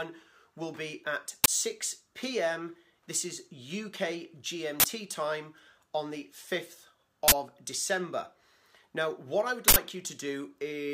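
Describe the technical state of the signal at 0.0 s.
At 0.0 s the signal is intact, with no technical fault present at that moment.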